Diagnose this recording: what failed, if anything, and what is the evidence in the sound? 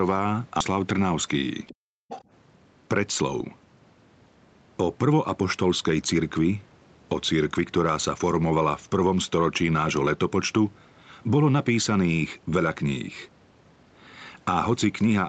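At 0.60 s there is a skip ahead. About a third of a second of speech is missing, with no fill. The two sides join almost directly. This points to the network or jitter buffer stage: a stretch of audio was dropped and playback jumped forward to audio already waiting.

Other side's voice leaking through appears at 1.67–1.74 s and again at 2.09–2.24 s. It is faint, roughly 15 to 20 dB below the talker, and scrappy. The likely cause is a loudspeaker on the talker's device whose echo the call's canceller did not fully remove.

Between 1.74 and 2.09 s the background is gated by the echo canceller. Room sound drops by up to about 40 dB for roughly 0.4 s, then returns. The call processing clamped the microphone while far-end audio was playing.

Jitter buffer speed-up occurs at 4.80–5.72 s, about 6% fast, and at 6.18–6.56 s, about 9% fast. Pitch holds, but the speech sounds hurried. The buffer had grown too deep, so the receiver trimmed a few tens of milliseconds in small pitch-period pieces.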